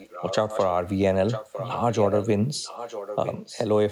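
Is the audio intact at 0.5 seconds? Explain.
No. From 0.0 to 0.67 s the speech carries an echo leak: a fainter copy trailing about 0.96 s behind, roughly 10 dB below the direct speech. The likely cause is a loudspeaker at the far end whose echo canceller let its own pickup return.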